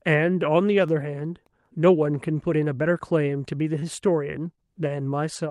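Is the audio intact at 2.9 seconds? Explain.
Yes, the audio is intact at 2.9 seconds, with no dropout, click, distortion or other audible fault at that moment.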